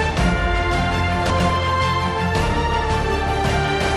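A brief jumbled stutter between 1.3 and 1.5 s comes from chunks out of order. Two neighbouring 100 ms blocks of audio swap places, so the later block plays first and the earlier one follows it one chunk late. No sound is missing, but the reversed order scrambles that fifth of a second and creates three hard joins.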